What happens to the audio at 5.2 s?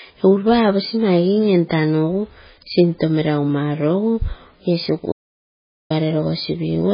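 At 5.2 s the speech is inside an audio dropout to silence running from 5.12 to 5.90 s. For about 0.78 s the signal falls to silence with no room tone, likely because the input was lost while the recorder kept writing empty samples.

The sound around the gap also carries MP3 compression damage. Nothing reaches above 5 kHz, and the remaining band sounds watery and swirly as weak components flicker between frames. That points to heavy encoding at a very low bitrate, likely around 16 kbps.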